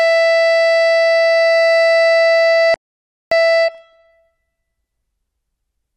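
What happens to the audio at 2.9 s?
A rebuffering stall runs from 2.74 to 3.31 s. The player exhausted its downloaded audio and halted until more data arrived, so the music drops to silence for about 0.57 s, then resumes exactly where it stopped, with nothing skipped but extra time inserted.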